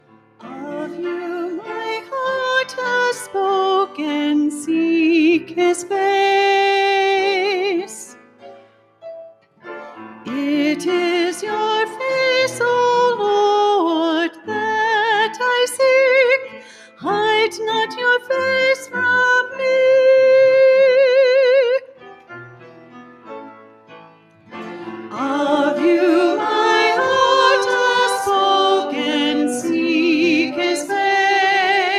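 A noise suppressor applied to music or sounds runs through the whole clip, from the start to the end. Built for speech, it treats sustained tones, ambience and decaying tails as noise and pulls them down, while sharp onsets pass. The gain it applies swings by roughly 10 dB, so the sound pumps and thins, with held material sinking and reviving as the suppressor's estimate shifts.

Sound cut by the noise suppressor is heard at five points: 0.00 to 0.44 s, 8.06 to 9.03 s, 9.30 to 9.66 s, 16.56 to 17.03 s, and 21.82 to 24.54 s. In each, the suppressor judged the material to be noise and cut it harder than its surroundings, by about 12 dB at its deepest (about 11 dB at 16.56 s). Sustained sound drops away and tails end early. The last span, nearly three seconds long, is the longest.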